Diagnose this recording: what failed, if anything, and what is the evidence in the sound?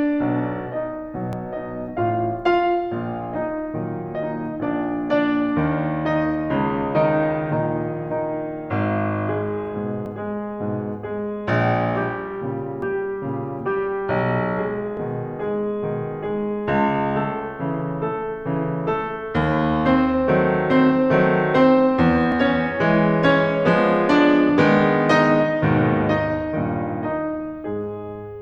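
Dropped buffers, likely overruns at the driver or buffer stage, at 1.33, 10.06, 12.82, 14.97 and 22.32 s in this music. Each is an abrupt jump forward in the music with no gap of silence. At four points roughly 5 ms of audio is missing. At 10.06 s about 20 ms is gone. The capture side fell behind, and the hardware overwrote those blocks before they were read, leaving the surviving audio spliced end to end.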